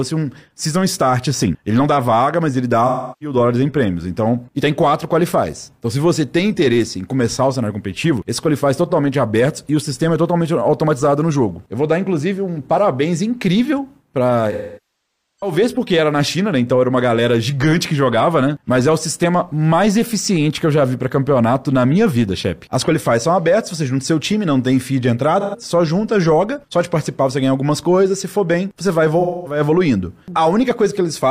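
Smeared, noisy patches interrupt the sound at 2.87 to 3.36 s, 14.52 to 15.52 s, 25.40 to 25.56 s and 29.19 to 29.60 s. This is AAC frame loss with concealment: the decoder rebuilt up to about 0.85 s of missing audio from the last good spectrum.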